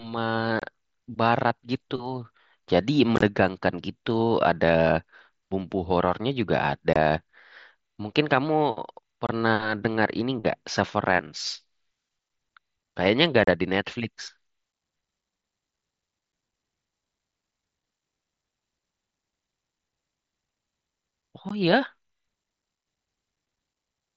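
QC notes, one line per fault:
0.60–0.62 s, 3.16–3.22 s, 6.93–6.96 s, 9.27–9.29 s, 13.44–13.48 s, 21.49 s: unconcealed Bluetooth headset packet loss. The speech drops out abruptly for about 15 to 38 ms. The drop at 3.16 s is broken into several holes over 60 ms. The lost audio was replaced by silence or an idle pattern rather than concealed, and the gap lengths fit runs of 7.5 ms mSBC frames on an otherwise wideband link.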